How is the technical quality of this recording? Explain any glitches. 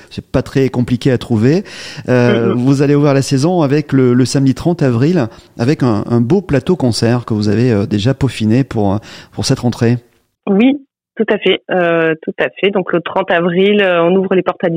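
No faults can be heard in this recording, so there are no glitches to explain.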